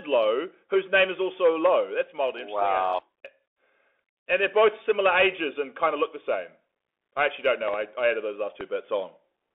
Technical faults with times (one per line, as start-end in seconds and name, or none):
0.00-9.54 Bluetooth CVSD headset codec
7.68-7.76 loud pop
8.61-8.63 loud pop